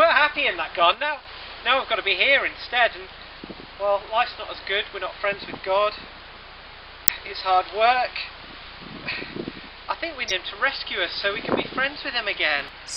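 The audio carries two kinds of fault. From 0.94 s to 1.25 s there is a sudden gain jump. The level drops by about 6 dB from one sample to the next, and the background noise drops with it. It then returns at 1.25 s. There is no fade in either direction, so each edge can give a small click. The likely cause is a gain change applied digitally without a ramp. Two short bursts of damaged data in a compressed stream follow, at 7.04 to 7.10 s and at 10.27 to 10.32 s. Each is brief, roughly 60 ms and 45 ms long. In those spots the compressed frames are corrupt. The decoder cannot read them properly and loses sync. It then hunts for the next valid frame header.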